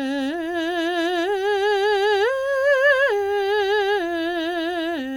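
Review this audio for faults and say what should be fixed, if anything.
Nothing needs fixing: no technical faults turn up anywhere in the music, so the signal can stay as it is.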